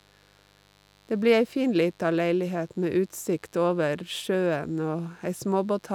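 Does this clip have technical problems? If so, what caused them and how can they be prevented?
Yes. A steady, raspy mains buzz runs through the whole speech clip at a modest level, well below the speech. Switching spikes from a dimmer, rectifier or unshielded cable repeat twice per 50 Hz cycle, spreading harmonics into the kilohertz range. Prevent it with shielded, balanced cabling away from dimmers and power supplies.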